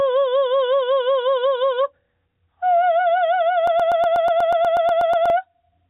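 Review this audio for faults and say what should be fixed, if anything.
Gain pumping runs through the whole music clip: the gain ducks by something like 15 dB under each loud hit. Unlike a deliberate side-chain effect, the ducking tracks every peak, which points to input gain set far too high and a fast limiter likely clamping it. Lowering the input gain so the limiter rarely engages prevents it.

A broken-record loop runs from 3.67 s to 5.3 s, where a 0.12 s fragment repeats exactly 13 times back to back and the music due in that span never plays. Identical repeats with no gap set it apart from a stutter or a jitter-buffer glitch, which sound broken up rather than cycling. A stalled player or stream likely kept resending its last buffer. A watchdog that outputs silence or resyncs when no new data arrives prevents it.

The call path cuts everything above 4 kHz, which fits G.711 mu-law, and that is expected for this path.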